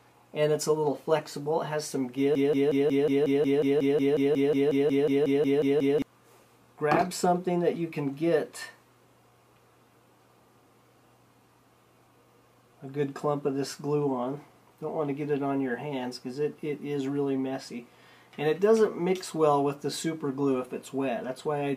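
From 2.35 s to 6.02 s a broken-record loop repeats one 0.18 s fragment 20 times, back to back and identical, likely because playback stalled and kept resending its last fragment. Unlike echo, nothing decays, and the audio due then is lost.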